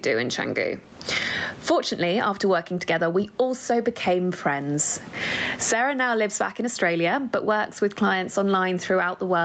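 Speech over a call, with gain pumping throughout: loud and soft parts are pulled closer in level and the sound is squashed, with a gain swing of around 25 dB. The likely cause is input gain set far too high, with a fast limiter clamping it back down. On a waveform the speech peaks look flattened to a near-even height, while the gaps fill with rising noise. A spectrogram shows the noise floor brightening between phrases and darkening under them, all below the 8 kHz ceiling of the call path.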